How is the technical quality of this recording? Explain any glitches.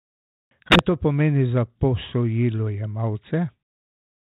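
One glitch: packet loss on the ADPCM call, from 0.69 to 0.8 s, just before "to pomeni za". About a packet's worth of audio drops to silence, leaving a hard-edged gap. The decoder's predictor and step size then fall out of step with the sender's, so the speech comes back with brief distortion before settling. The light telephone-band coding throughout fits G.726 at 32 kbit/s.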